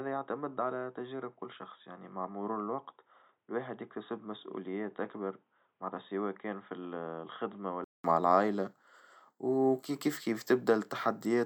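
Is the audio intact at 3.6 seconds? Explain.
No. From 0.0 to 8.04 s the sound is narrowband and boxy, with nothing above 3.8 kHz, roughly 10 dB quieter and carrying a faint new noise floor. This is likely an input switched to a poorer device. A spectrogram shows a flat ceiling at 3.8 kHz, and the waveform shows smaller amplitude, then a 200 ms gap at 8.04 s.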